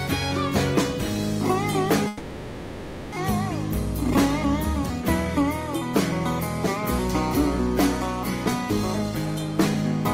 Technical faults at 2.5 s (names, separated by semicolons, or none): long network dropout